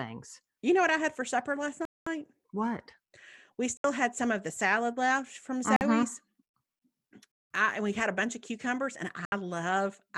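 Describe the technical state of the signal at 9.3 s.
At 9.3 s the speech drops out completely for about 70 ms, from 9.25 to 9.32 s, then resumes. This is a Bluetooth stall, likely caused by radio interference delaying packets until the headphones' buffer emptied and playback halted while retransmissions arrived. On a waveform it shows as a near-flat line cutting abruptly into the signal; on a spectrogram, a narrow vertical band empty at every frequency, with the speech energy continuing on either side.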